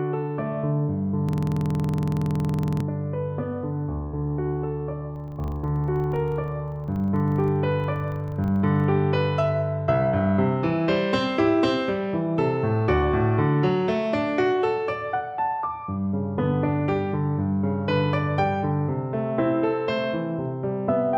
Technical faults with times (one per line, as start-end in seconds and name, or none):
1.29-2.80 system hang loop
5.16-8.90 filter restarted on every block